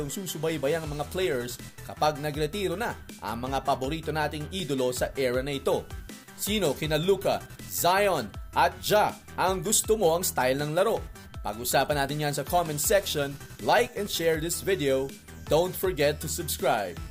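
From 5.54 to 7.04 s the signal drops to a low bit depth with dither, about 9 bits, with noise added before rounding. The quantisation error becomes a steady, even hiss roughly 35 dB below the signal, without distortion.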